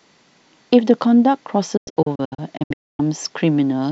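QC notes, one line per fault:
1.77–3.00 s, digital broadcast dropout: the receiver stopped getting good frames and muted until clean ones returned, so the speech breaks into several short holes spread over about 1.2 s, about 0.67 s lost in total, the longest gap 256 ms. Each mute fades in 8 ms, so the cuts are quick but not clicky. The gap lengths fit 32 ms frames. The waveform shows flat silent blocks, and the spectrogram shows full-band blank vertical strips with sharp edges.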